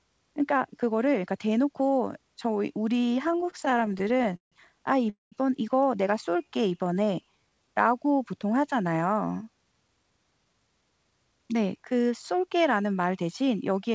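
From 3.28 to 4.54 s the speech shows repeated stalls (stutter): more than twenty brief hitches, the longest about 153 ms, where late packets left the jitter buffer empty and the last sound was stretched to cover them. About 30 percent of that stretch is filled-in sound, so nothing is lost, but delivery drags and judders.

At 5.10 s a short call audio freeze holds the sound for 0.22 s, most of it as near-silence after a brief held tail, before speech resumes where it stopped. The likely cause is packets held up in transit, with the receiver's delay growing by the same 220 ms.

Between 6.12 and 7.84 s a jitter buffer slow-down plays the audio at about 86 percent speed with unchanged pitch. The receiver repeated single pitch periods to rebuild its reserve, adding 242 ms, so syllables sound drawn out.

From 9.58 to 12.63 s a jitter buffer speed-up runs the speech at about 112 percent with pitch intact. 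Short pitch-period slices, roughly 0.4 s in total, were cut to shed excess delay, giving a hurried, clipped pace. Throughout, the call path's band limit leaves nothing above 8 kHz, which fits a wideband codec such as G.722.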